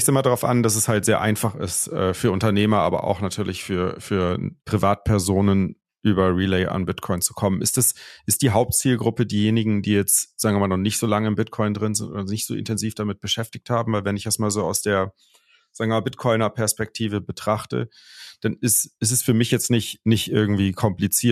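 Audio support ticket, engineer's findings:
Listened to the whole speech recording and found nothing to flag, so there's no fault to log on this one.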